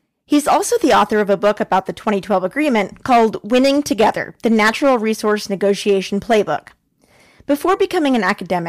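From start to finish the speech suffers hard clipping: the signal was driven about 13 dB beyond what a stage in the chain could pass, so the louder peaks, roughly one sample in twenty-five, are sliced flat. Those squared-off tops generate harmonics reaching high into the spectrum, heard as a harsh fuzz riding every strong syllable. A waveform shows plateaued peaks, and a spectrogram shows vertical smears of broadband energy above each loud moment.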